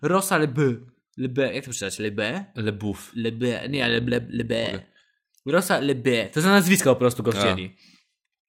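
From 3.62 to 5.18 s, overlap-add ripple: badly overlapped frames swing the level about 6 dB roughly 50 times a second, a rough flutter.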